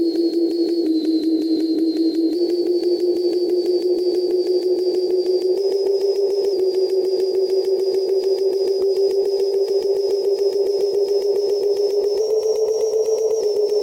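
A recording of sounds with three drift correction steps, where speed and pitch jump together and then snap back. From 0.86 to 2.35 s playback slows by 6.19%, dropping pitch 111 cents; from 5.56 to 6.53 s and 12.20 to 13.41 s it runs 6.19% fast, raising pitch 104 cents, roughly a semitone each way. This is likely clock-matching software changing the rate in one step to drain or refill its buffer.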